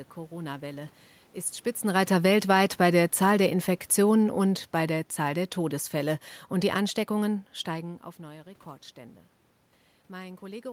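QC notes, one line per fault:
1.99–7.51 s, automatic gain falling: the AGC judges the input too loud or its background noise too strong and eases gain down about 8 dB, so the speech and room noise sink together.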